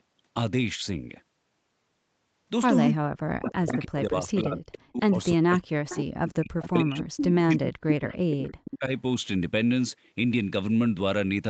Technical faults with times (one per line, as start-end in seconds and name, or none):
2.92-7.83 speech suppressed in double talk
3.43-4.39 echo leak
5.89-5.99 echo leak
6.63-8.75 echo leak
8.55-8.93 speech suppressed in double talk